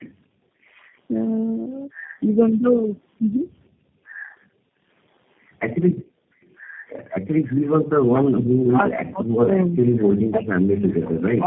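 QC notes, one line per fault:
Throughout: tandem speech coding. The speech sounds rough, muffled and warbly, with nothing above 3.8 kHz. The call passed through four speech codecs in a row: AMR-NB 6.7 kbit/s, GSM full rate 13 kbit/s, then G.729A 8 kbit/s twice, with G.711 links between them. It was decoded and re-encoded at each border, so every coder had to work on the already damaged output of the one before, and their losses stacked into a harsher result than any single link would give.
8.44–11.46 s: speech suppressed in double talk. The talker's level sinks for roughly the last 3 s of the clip, with the deepest dip around 40 dB, so the speech is pushed well down toward near-silence. This is likely the echo canceller acting while both sides spoke at once: unable to tell the near talker apart from the loudspeaker echo, it turned the whole signal down, taking the wanted speech with it.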